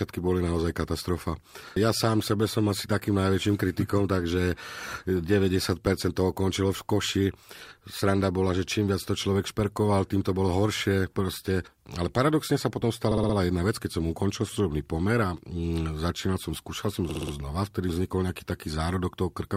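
Repeated frames stutter the speech at 4.65 s, 13.11 s and 17.09 s. A 60 ms block replays two, four and four extra times, adding 120, 240 and 240 ms.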